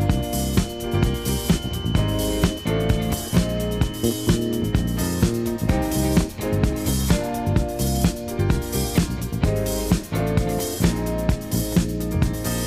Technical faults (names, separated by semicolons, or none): feedback whistle